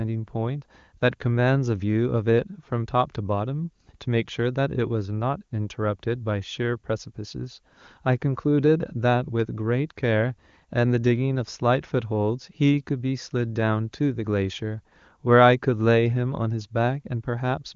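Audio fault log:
No fault to log for this speech audio.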